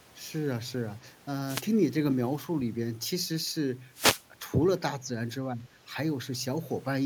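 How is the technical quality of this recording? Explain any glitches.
The recording has three audible glitches of two kinds, each brief.

Wireless microphone noise hits, 1.47–1.63 s and 3.92–4.25 s: the FM radio link fades as reflections cancel, so receiver noise rises into a short burst of static.

Speech suppressed in double talk, 5.53–5.64 s: the speech dips by about 10 dB for roughly a tenth of a second, likely an echo canceller turning down the talker while far-end sound played.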